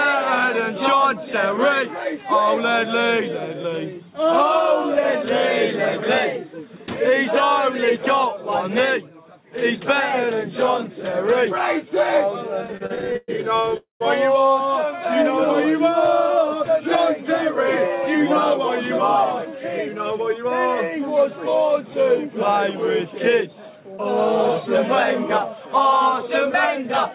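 Packets reaching the receiver late or too slowly emptied the jitter buffer repeatedly between 12.65 and 13.75 s. The result is repeated stalls (stutter): 18 gaps, the longest 116 ms, were filled by continuing the last sound, fading it in the longer waits. That concealment accounts for 340 ms, about 31% of the span, so the audio drags and stutters there while nothing is actually lost. Directly after, from 13.77 to 14.02 s, comes what is likely a call audio freeze from packets held up in transit. The receiver bridges 232 ms by extending the last sound, which fades to silence for 150 ms before the audio resumes from where it stopped. The net effect is an inserted gap rather than missing material, with the playback delay pushed 232 ms later. Once the backlog arrived, the buffer held more audio than its target, and the receiver trimmed short pitch-period-sized pieces in rapid succession to catch up. 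This jitter buffer speed-up occurs three times: 16.30 to 18.61 s at 104% speed, removing around a tenth of a second; 19.88 to 20.69 s at 106%, removing around a twentieth of a second; and 25.61 s to the end at 104%, removing somewhat less than a tenth of a second. The pitch stays the same throughout, and the 106% stretch sounds hurried. Across the whole clip, nothing above 4 kHz is present, which fits a G.711 mu-law call path at 64 kbps.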